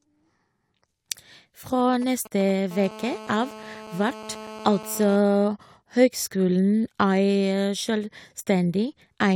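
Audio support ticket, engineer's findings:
GSM signalling bursts, 1.80 to 2.51 s. Galloping dit-dit-dit of short buzzes at 217 Hz, roughly 20 dB under the speech. Source: a nearby 2G handset sending brief groups of radio bursts ahead of an incoming call or text; the audio input stage rectifies the RF and passes the envelope into the signal chain.

GSM phone buzz, 2.71 to 5.16 s. Hard, raspy buzz at 217 Hz with many harmonics, about 17 dB below the speech and unrelated to it. Nearly steady through the span, consistent with a nearby 2G handset on a call, bursting 217 times a second. Audio circuitry rectifies the RF pulses; shielding or filtering at the input is needed.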